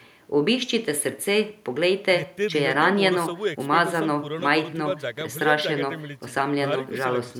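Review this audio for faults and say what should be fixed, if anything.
No faults turn up in this speech recording, so nothing needs to be fixed.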